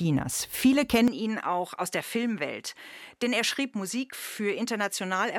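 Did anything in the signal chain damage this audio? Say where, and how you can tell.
Yes, at the capture end. From 1.08 s to the end the sound abruptly loses everything above 13 kHz, drops about 5 dB, and picks up a faint new noise floor, roughly 55 dB down, with no gap. That's most likely the input switched to a poorer device mid-recording.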